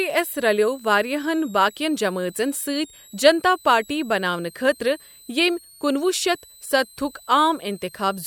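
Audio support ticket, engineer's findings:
Switching supply whistle, throughout the speech. High tone between 3.72 and 4.35 kHz, centred near 4 kHz, about 25 dB below the speech. Probable component: a switching regulator in audible burst mode or beating with a second supply. Unlike mains hum, the tone sits high rather than at low mains harmonics.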